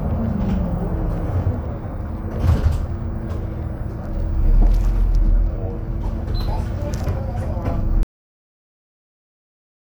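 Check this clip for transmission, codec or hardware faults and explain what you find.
One fault is present: a cut-off end. At 8.03 s the audio stops mid-sound. The final buffers were never written or played back. There is no natural decay. The signal drops straight to digital silence, which holds until the end.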